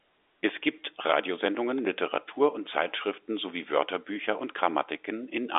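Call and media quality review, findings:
No faults found in this speech recording. The G.711 telephone coding path is audible as expected, with the sound confined to a narrow line band of roughly 250 Hz to 3.6 kHz and nothing above 3.8 kHz.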